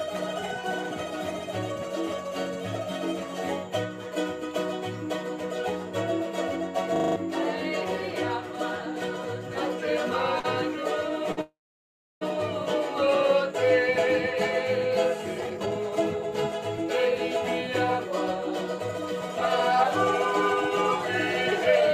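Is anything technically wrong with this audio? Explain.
Yes, there are four kinds of fault, and they cluster in the middle and back half of the clip.

From 6.96 to 7.16 s there's a system hang loop. A 40 ms slice repeats exactly five times, a stutter at 25 Hz. That's what you get when the machine or driver locks up and the sound hardware keeps replaying the same ring buffer. The loop length fits a buffer of about 40 ms. You hear a short mechanical rattle, and about a fifth of a second of real audio is lost underneath it.

Two short stalls from a late packet follow, at 10.39 to 10.46 s and at 11.32 to 11.39 s. In each case a packet didn't arrive on time, the jitter buffer emptied, and the receiver held the last sound until the packet came in. The fill is 44 ms the first time and 52 ms the second. Nothing goes missing. You just hear a sound drawn out a bit too long, with a faint buzzy edge.

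Immediately after, from 11.41 to 12.23 s, there's a call audio freeze. The last sound is stretched and fades, and roughly 690 ms of that stretch is silence before the audio picks up where it left off. The total inserted gap is 800 ms and nothing is skipped. The likely cause is a run of held-up packets draining the jitter buffer. It comes across as a fade into silence that then resumes.

Finally, from 15.35 to 19.84 s there's a jitter buffer speed-up. The receiver had banked too much audio, so it trimmed out many tiny pitch-period pieces, roughly 400 ms in total, to bring the delay back down. The result runs at about 108% of normal speed with the pitch unchanged. It sounds slightly rushed, a little hurried compared with the rest of the clip.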